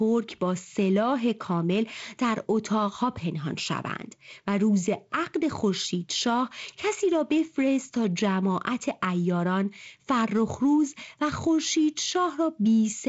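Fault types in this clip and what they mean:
No faults are present.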